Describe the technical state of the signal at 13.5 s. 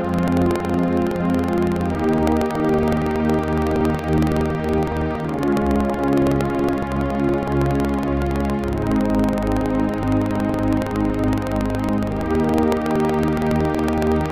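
At 13.5 s you're still hearing the buffer tearing that runs through the whole clip: a steady robotic rattle at about 21.5 Hz, which fits a 2048-sample buffer. The writer and the hardware read pointer have drifted so they cross inside every period, so a small slice of each buffer, a few percent, is stale audio from roughly 150 ms back, spliced in with hard edges. It buzzes only while there's signal.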